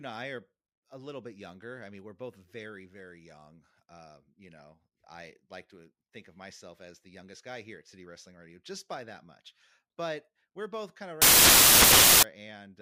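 From 11.22 to 12.23 s the speech collapses into loud, harsh broadband noise: samples built from the wrong bytes, so the fast-changing low bits dominate. Spectrogram shows full-band noise; waveform becomes a solid block.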